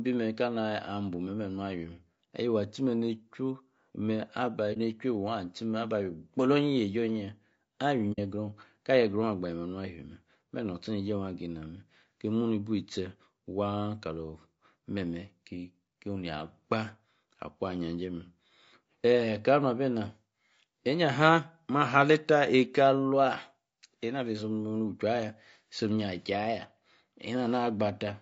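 Right from the start the speech has a rough, grainy texture, with a noisy fill between the pitch harmonics and a top end that sounds thinned out and a bit synthetic. That points to low-delay AAC compression, likely AAC-ELD, the video-call codec, squeezed to something like 32 kbps. Its short frames can't pin down the harmonics cleanly, so at that rate the voice smears into grain, and the damage is plainly audible across the clip.

At 4.73 s there's a brief soft hole of about 40 ms, and at 8.12 s a longer one of about 70 ms. Both are AAC frame loss with muting: the decoder lost a frame's worth of data, then about two, and zeroed the spectrum for them. Because the overlapping windows fade the sound out and back in, these come across as smooth-edged dips in the speech.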